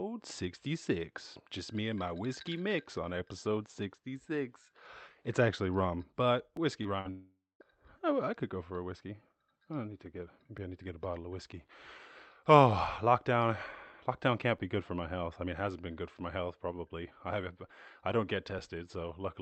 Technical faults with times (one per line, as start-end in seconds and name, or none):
2.56 overlapping chunks
6.57 overlapping chunks
6.83-7.07 short concealed packet loss
7.11-7.62 long network dropout
10.58 overlapping chunks
14.58 overlapping chunks
18.59 overlapping chunks